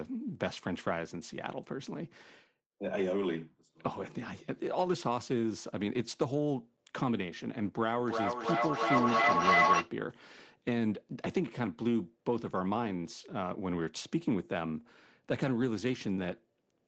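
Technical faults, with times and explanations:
3.21–3.23 s and 4.85–4.91 s, lost packet rebuilt from error correction: packets dropped, but the next ones carried rough low-bitrate copies, so no gap, just brief grainy, noisier patches.
8.0–9.96 s, feedback howl: two devices sharing a room looped mic to speaker, building a tone near 1 kHz, with repeats about every 0.3 s, peaking about 7 dB over the speech.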